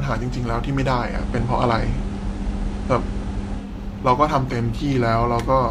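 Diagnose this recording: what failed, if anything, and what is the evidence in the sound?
Digital radio blending to analogue, at the receiver: from 1.01 to 3.75 s the hybrid receiver crossfades over 0.2 s to the FM signal and back. Spectrograms show a raised hiss floor about 35 dB below the signal; the waveform shifts about 3 dB in level.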